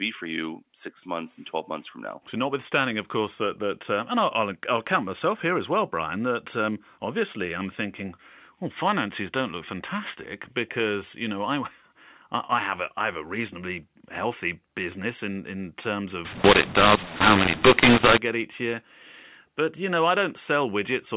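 From 16.25 to 18.18 s there's a burst of mu-law and A-law mixed up: the A-law telephone stream gets read as mu-law, so levels scramble, the speech turns harsh and gritty, and the quiet gaps suddenly fill with hiss, all still within the narrow sub-4 kHz telephone band.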